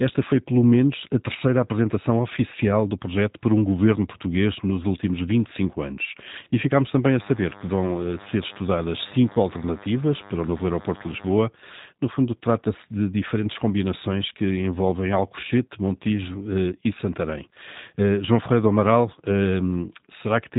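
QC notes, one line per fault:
throughout: G.729 codec. Speech is band-limited with nothing above 3.8 kHz and sounds rough and synthetic from pulse-based excitation, consistent with an 8 kbit/s stream.
7.09–11.43 s: DECT cordless phone buzz. A steady, thin 100 Hz buzz rich in harmonics, from a 10 ms radio burst rectified in the audio path, sitting around 20 dB below the speech.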